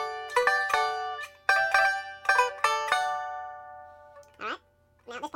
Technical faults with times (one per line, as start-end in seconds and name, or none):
0.00-5.35 audio read two samples at a time (double speed)